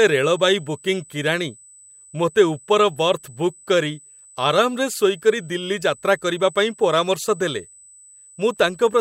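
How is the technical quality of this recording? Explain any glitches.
The recording has one steady fault, a USB whine, present for the whole clip. It sits at a fixed 8 kHz, strongest at its 16 kHz multiple, about 25 dB below the speech. The USB bus draws current in 125-microsecond microframes. That ripple leaks through shared power or ground into the audio path. It is heard as a thin, high, constant tone behind the speech.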